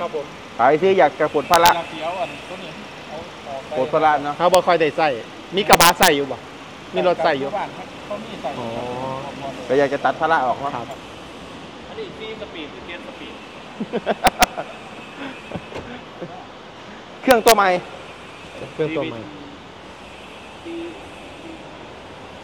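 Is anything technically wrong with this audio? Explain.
Yes, there's integer overflow at 1.54–1.69, 4.55, 5.73–6.08, 14.27–14.44 and 17.31–17.52 s. Peaks running up to about 4 dB past full scale wrap to the opposite sign instead of being limited, so loud moments snap into violent cracks, harsher than clipping.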